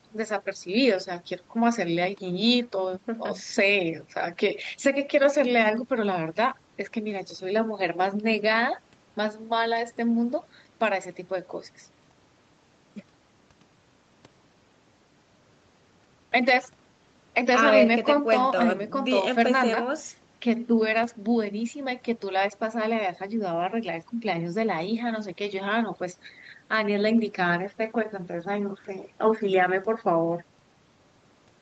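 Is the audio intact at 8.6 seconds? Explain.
Yes, the audio is intact at 8.6 seconds, with no dropout, glitch or distortion at that moment.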